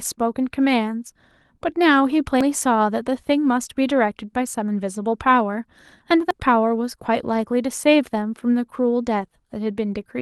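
Audio missing between chunks at 2.41 s and 6.31 s: about a tenth of a second drops out and the edges join abruptly, likely from a recorder switching 4-second chunks. Lost packet rebuilt from error correction at 7.05–7.07 s and 9.19 s: each 20 ms packet was played from the next packet's low-bitrate copy, so there is no gap, only a brief rougher, noisier patch in the Opus call audio.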